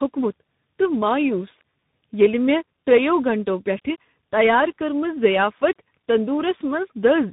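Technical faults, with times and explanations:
Throughout: tandem speech coding. The speech was decoded and re-encoded across three speech codecs in a row. Each pass compounds the last, leaving it rough, warbly and muffled, with nothing above 3.8 kHz.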